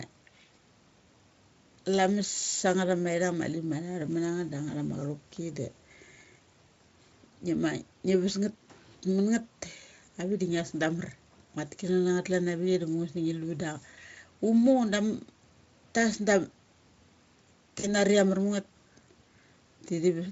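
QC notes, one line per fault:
17.79 to 17.95 s, VoIP packet loss concealed by the speech codec: about 40 ms dropped out, which fits two lost 20 ms frames. The decoder stretched its last pitch and filter with falling gain, so the sound turns into a buzzy tone or coloured noise, fades, then stays weak briefly.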